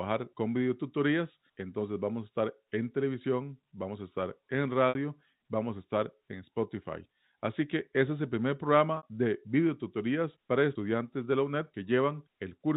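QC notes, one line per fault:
4.89 s and 8.97 s: packet loss with pitch repetition. Each 60 ms gap, after "vamos a estar en" and "ese es el primer", is filled by repeating the last pitch period, giving a brief buzzy hold.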